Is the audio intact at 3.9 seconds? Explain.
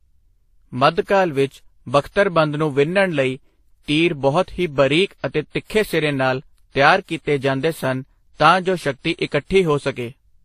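No. At 3.9 seconds, as across the whole speech clip, nothing is heard above about 15.2 kHz, and the lossy smearing has more than one character at once: the different codecs' artefacts are heard together. This is likely transcoding between lossy codecs. Each later encoder spent bits re-coding the previous one's artefacts and added its own, while the lowest cut-off in the chain stayed. A single encode would show only one artefact pattern.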